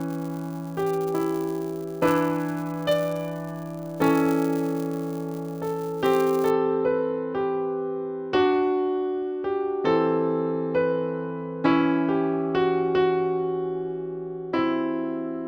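From the start to about 6.51 s, the sound carries a 200 Hz buzz from a filter restarted on every block. The filter drops its memory at each block boundary and begins again from silence, so every block opens with a small transient, 200 times a second. Unlike steady mains hum, this buzz rises and falls with the signal's level, because each tick is a piece of the signal itself.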